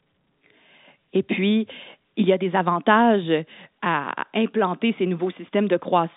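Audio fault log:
No faults to log for this audio, which comes through a G.711 telephone line as expected.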